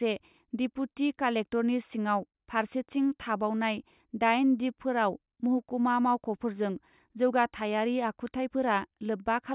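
No technical faults can be heard anywhere in the recording; the signal stays continuous and steady throughout.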